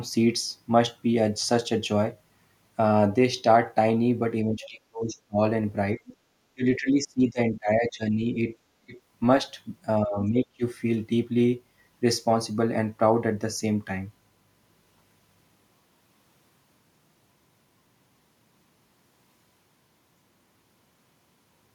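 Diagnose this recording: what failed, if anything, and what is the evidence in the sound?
The fault sits in the call processing stage: speech suppressed in double talk. The talker's speech dips sharply at 4.45 to 5.38 s, 6.54 to 8.38 s, 8.83 to 8.97 s and 10.04 to 10.62 s, falling by about 20 to 30 dB at its deepest. The likely cause is an echo canceller that could not separate near speech from loudspeaker echo while both sides talked, so it attenuated everything. A network dropout would instead cut out abruptly and fully, not as a level duck.

The same stage also produces the other side's voice leaking through. A brief, faint second voice appears at 4.62 s and again at 6.07 to 6.16 s, at roughly 20 to 25 dB below the talker. Echo cancellation likely left residual far-end sound in the microphone signal after the device played it on its loudspeaker. Room reverberation would instead trail the talker's own speech, whereas these scraps are a different voice, short, the first arriving during a near-end suppression episode.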